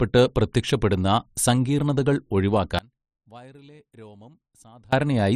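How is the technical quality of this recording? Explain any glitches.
The recording has one clear glitch: an audio dropout to a faint residue from 2.79 to 4.93 s. For about 2.1 s the speech collapses abruptly to a faint leak roughly 25 dB below normal level, then returns mid-flow. The likely cause is the signal path breaking while the downstream chain stayed live.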